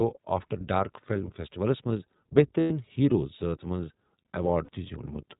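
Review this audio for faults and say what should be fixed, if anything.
The whole speech clip has gone through the iLBC codec, and it's plainly audible. Nothing survives above 4 kHz, so everything sounds telephone-narrow, and there's a slightly rough, synthetic edge on the voice because each frame's excitation is coded on its own. The texture fits iLBC's 20 ms frame mode at 15.2 kbps. To prevent it, carry this audio over a wideband codec such as Opus instead of narrowband iLBC.

There are two lost iLBC frames events. The first runs from 2.60 to 2.71 s, about 100 ms, right before "ہیرو زٲژ". It sounds like a held, faintly buzzy vowel where the decoder kept repeating the last pitch cycle with noise mixed in, and it points to roughly five 20 ms frames going missing. The second is shorter, from 4.64 to 4.69 s, about 40 ms, which fits two frames. Recovery is nearly immediate both times because iLBC frames don't depend on earlier ones. 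To prevent these, fix the packet loss on the network path, or add forward error correction or redundancy so lost frames can be rebuilt.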